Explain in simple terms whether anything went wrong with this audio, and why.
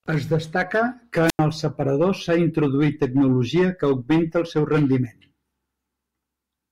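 At 1.27 to 1.39 s there is a wireless microphone squelch dropout. The radio signal faded, so the receiver muted the speech for about 90 ms.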